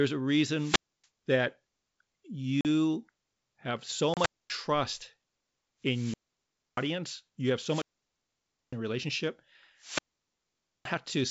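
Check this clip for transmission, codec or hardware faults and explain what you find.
Two faults recur in this speech: wireless microphone squelch dropouts and ADPCM packet loss. The G.722 wideband coding at 64 kbit/s sounds clean.

Wireless microphone squelch dropouts occur at 0.54–1.06 s, 4.00–4.62 s, 5.84–6.91 s (before "you have"), 7.61–8.76 s (between "you have" and "in relationship"), and 9.77–10.90 s (after "in relationship"). Each time the radio signal fades until the receiver's squelch closes. You hear a rise of hiss, then near silence lasting about 280, 240, 640, 910 and 870 ms respectively, then the voice returns.

Packet loss on the ADPCM call occurs at 2.61–2.66 s and 4.14–4.19 s, the second inside a dropout. About 40 and 30 ms of audio were lost, which fits a few packets each time. Each gap is filled with hard-edged silence, and the decoder's predictor and step size drift from the sender's. 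The speech resumes slightly distorted.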